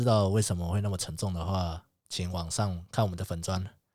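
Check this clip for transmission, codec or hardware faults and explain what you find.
Nothing stands out here; the speech just runs along without any fault worth pointing to.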